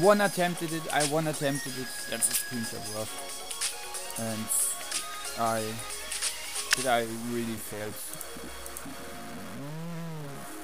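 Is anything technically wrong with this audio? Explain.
Yes. A stuck bit runs throughout the clip. Harsh, buzzy distortion rides on the sound, and pauses fill with a steady noise at around -40 dBFS. This is likely one data bit held fixed, so about half the samples jump by that bit's weight and small values flip with the sign.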